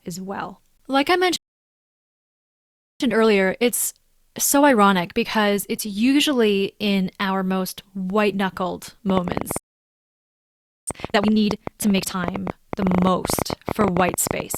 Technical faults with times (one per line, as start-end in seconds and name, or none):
1.36-3.00 playback stall
3.00-6.00 time-compressed catch-up
9.10-14.57 train of clicks
9.58-10.87 playback stall
10.87-12.15 time-compressed catch-up